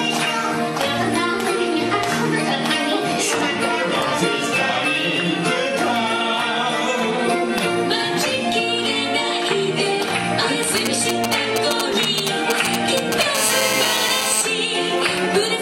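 From 10.63 to 13.23 s come GSM signalling bursts: a nearby 2G handset exchanging short control transmissions that the audio circuitry rectifies. They sound like a galloping dit-dit-dit of brief 217 Hz buzzes, at roughly the sound's own level. A spectrogram shows short clusters of evenly spaced harmonic stripes; the waveform shows grouped rectangular pulse trains.

From 13.35 to 14.42 s the phone is in a call, producing GSM phone buzz: continuous transmission bursts at 216.7 Hz, rectified into a hard, raspy buzz about 2 dB below the sound. A spectrogram shows a dense ladder of horizontal harmonics from 217 Hz upward, and the waveform shows a steady square-edged pulse pattern riding on the audio.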